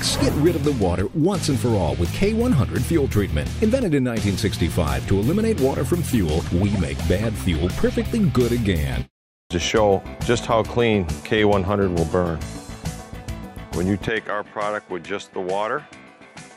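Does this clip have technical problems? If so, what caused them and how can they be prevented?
Yes. From 14.09 s to the end at 16.57 s, the sound abruptly turns duller and noticeably quieter, dropping about 10 dB with no gap at the change. Nothing remains above 11.4 kHz, and a faint new background noise sits far below the signal. This likely comes from an input switched to a poorer device mid-recording, another microphone or a headset's call profile with a narrower band, its own level and its own noise floor. To prevent it, lock the recording input to one device and disable automatic device switching before recording.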